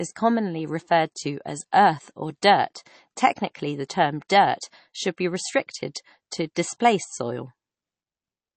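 Throughout the speech the sound is watery and swirly, with nothing above 8.3 kHz and plainly audible codec damage. This is likely MP3 compression at a low bitrate, around 32 kbps, where the encoder drops the treble and lets weak frequency lines flicker between frames.

At 1.71 s, after "commonly referred to as" and before "earth or dirt", a brief hiss of about 11 ms precedes a softened attack. This is pre-echo: quantisation noise scaled for the loud onset spreads across the whole transform block into the quiet moment before it. The same smear returns at 2.42 s after "to as earth or", spreading about 10 ms ahead of the attack.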